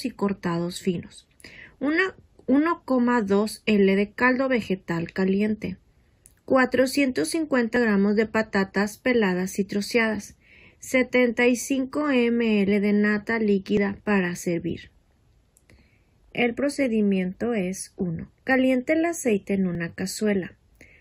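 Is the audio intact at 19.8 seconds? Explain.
No. At about 19.75 s there is an overlap between stream segments. Two adjacent segments claim the same stretch of time, so the player trims the supposedly duplicated portion, and roughly 14 ms of sound that was never actually repeated disappears. The waveform jumps straight across the cut, giving a brief click or tiny skip. It occurs at a seam between 6-second segments. What sets it apart from a dropout is that no silent hole is left behind; the sound resumes immediately, just slightly ahead of where it should be.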